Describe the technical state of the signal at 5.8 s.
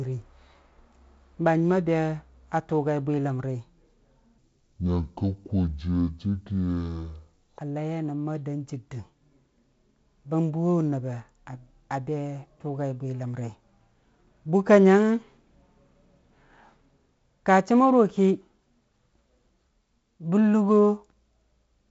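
At 5.8 s the speech falls inside a section at the wrong speed, from 4.38 to 7.59 s, likely replayed against the wrong clock at 0.565 times its recorded rate. Speed and pitch sink together, leaving the speech slow and deep, roughly ten semitones low.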